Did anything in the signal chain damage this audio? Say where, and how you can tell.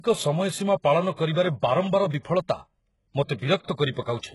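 Yes. The codec stage damaged it. Heavy codec damage points to HE-AAC at a very low bitrate. Replicated treble makes sibilants gritty and metallic.

Pre-echo comes from the codec. A hiss runs ahead of attacks from 1.12 to 1.18 s and from 3.91 to 3.96 s. Block-spread quantisation noise fills that quiet.

Dropped samples cause single sharp clicks at 1.33 s and 2.14 s. A tiny sliver of the stream vanishes, making the waveform jump, likely from a driver or buffer glitch.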